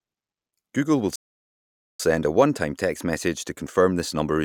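At 1.16 s the speech cuts out abruptly and the output stays silent for about 840 ms before picking up again at 2.00 s. This playback stall likely comes from the player running out of buffered data, or its thread being blocked, until it recovered.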